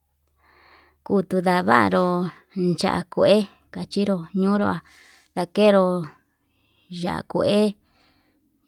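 From 4.55 to 4.65 s the speech turns briefly rough and grainy, with a noisy quality, but it never drops out or goes silent. This is a lost packet rebuilt from error correction. The rebuilt audio, about 60 ms in total, fits roughly three lost packets. The packet after each loss carried a low-bitrate backup copy, and the decoder played that coarser copy in place of the missing audio. That is why the sound stays continuous but degraded.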